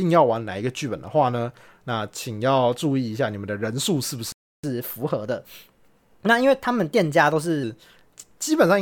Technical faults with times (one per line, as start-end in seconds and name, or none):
4.32-4.63 playback stall
4.63-7.63 catch-up at higher speed